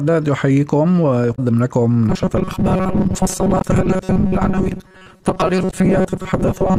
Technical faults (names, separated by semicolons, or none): damaged data in a compressed stream; robotic sound from repeated short buffers